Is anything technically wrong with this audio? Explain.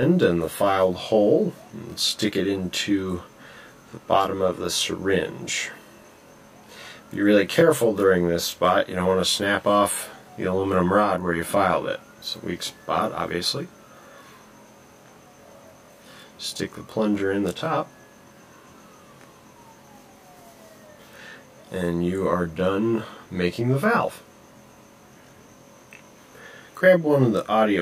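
Yes. Throughout the clip there is channel delay causing comb filtering. One channel arrives roughly 20 ms behind the other, and when the two are summed to mono, the content they share cancels at evenly spaced frequencies, starting at around 20 Hz. The result is a rough, slightly doubled sound. The notches stay fixed for the whole clip rather than sweeping as a flanger's or phaser's would, and the lag is too short to be heard as a separate echo.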